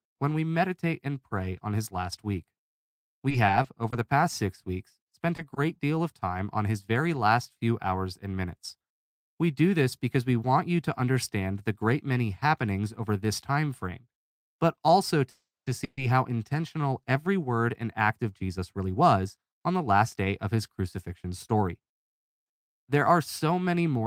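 You've got a speech recording here with a few network-style glitches. From 3.03 to 3.94 s, just before "the past six weeks", there's repeated packet loss (robotic sound): five short holes, none over 20 ms, each patched by stretching the previous sound, so it goes choppy. Two short concealed packet losses at 5.36 to 5.40 s and 5.54 to 5.58 s, the second right before "deal of time on", come across as brief smears where 20 ms of audio got filled in. At 15.30 to 15.68 s and 15.84 to 15.99 s, ahead of "how intentional every", you hear call audio freezes: the last sound hangs and fades, going silent for about 230 ms in the first one, then picks up where it left off with nothing lost. That's likely packets held up in transit draining the jitter buffer. Then comes jitter buffer speed-up at 17.69 to 20.33 s and 21.09 to 21.95 s. Playback runs at 110% with the pitch unchanged, so it sounds hurried, with roughly a third of a second and a tenth of a second trimmed out.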